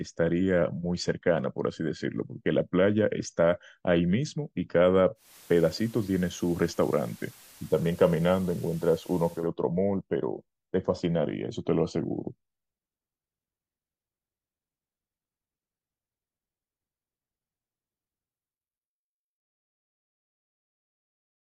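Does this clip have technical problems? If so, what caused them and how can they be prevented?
Yes. From 5.15 to 9.5 s the receiver shows digital radio blending to analogue, cross-fading over about 0.2 s to the FM signal of the same station. Hiss comes up well below the speech, and the level shifts by about 1 dB. Unlike a dropout or a noise-gate artefact, the hiss fades in and out with the blends. A stronger digital signal, from a better antenna or placement, would prevent it.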